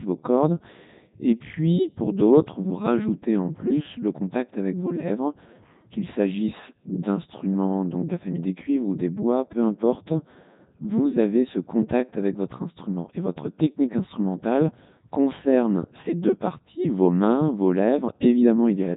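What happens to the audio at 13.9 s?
At 13.9 s, as across the whole clip, the speech is heavily mangled by the Codec 2 vocoder. It sounds buzzy and robotic, with nothing above 3.8 kHz, which fits its 3.2 kbit/s mode. Unlike a plain low-pass, the voice is rebuilt from sine waves rather than merely muffled.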